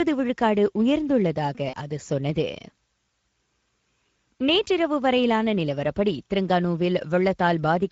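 Throughout the speech, Speex codec damage is plainly audible. The low-rate CELP coding leaves too few bits to model the excitation, so voiced sounds come out hoarse and grainy, with a noise-like sheen on the top end. That fits a middle setting around 16 kbps rather than gentle, broadband hiss.

From 1.69 to 1.76 s, VoIP packet loss concealed by the speech codec takes over. About 40 ms of data went missing, roughly two frames' worth. The decoder stretched its last pitch and filter into a brief, fading buzzy tone or coloured noise instead of leaving a silent gap or a click.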